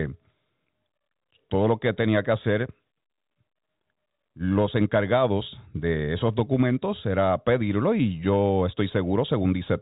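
Nothing stood out on listening to the speech, which carries the narrow telephone band of G.711 coding with nothing above about 3.8 kHz.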